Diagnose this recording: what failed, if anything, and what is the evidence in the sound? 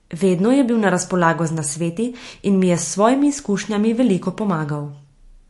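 MP3 compression, throughout the speech, most likely at the codec stage. The spectrum stops dead at about 11.3 kHz with nothing above it, and the damage is plainly audible as a watery, swirling texture with smeared onsets. That fits an encoder starved of bits, roughly a 48 kbps stream. It discards the treble band outright and zeroes weaker frequency lines, which flicker on and off between frames and leave the remaining sound unstable and smeared.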